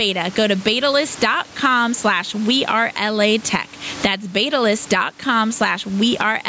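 Gain pumping runs through the whole clip. The level swings by roughly 15 dB. Room noise sits about 31 dB below the speech. Loud and soft parts sit squashed together. The likely cause is excessive microphone gain reined in by a fast limiter.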